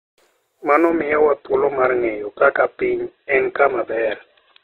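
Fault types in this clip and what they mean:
Adaptive stream at a lower bitrate: from 0.90 s to the end, the player drops to a leaner version with no gap, cutting everything above 4.1 kHz, which fits a fall to around 8 kbit/s.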